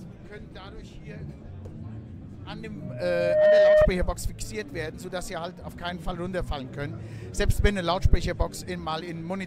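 From 2.80 s to 3.88 s there is loudspeaker feedback squeal. A steady tone at 614 Hz swells over about three quarters of a second. It ends up roughly 15 dB above the sound. The microphone was hearing its own loudspeaker. At that pitch the loop gain passed one.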